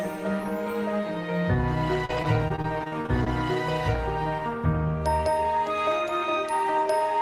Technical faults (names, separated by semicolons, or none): repeated packet loss (robotic sound)